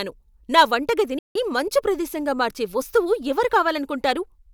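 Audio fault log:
1.19–1.35 s, playback stall: the speech cuts to silence for about 0.16 s, then resumes with "మంచు ప్రదేశంగా మార్చే వస్తువు", likely because the player ran short of data.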